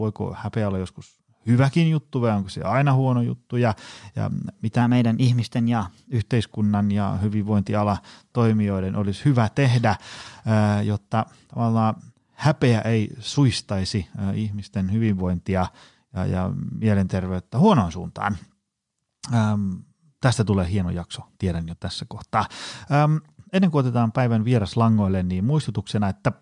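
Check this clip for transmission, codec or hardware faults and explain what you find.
One fault is present. From 4.82 to 6.19 s the clip has a wrong sample rate. The samples play 1.09 times faster than recorded, with no conversion, which fits 22 kHz audio played at 24 kHz. Speech sounds hurried and 1.47 semitones higher. On a spectrogram the harmonics shift upward, and in the waveform each cycle is compressed in time.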